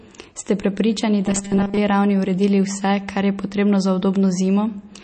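In this speech clip, the sound has likely passed through MP3 encoding at a low bitrate, which fits about 32 kbps. The encoder discarded everything above 8.3 kHz and let weak frequency lines drop in and out between frames, so plainly audible watery, swirly damage runs throughout. From 1.26 to 1.78 s, just before "ravni uredili", new audio likely arrived too seldom and the playback repeated a 5 ms chunk to fill the gaps, skipping real audio for most of that stretch. The repeats lay a rigid 200 Hz robotic buzz over the speech, which then follows the original only roughly.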